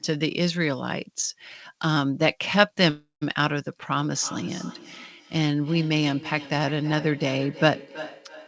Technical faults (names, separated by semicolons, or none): call audio freeze; feedback echo between two devices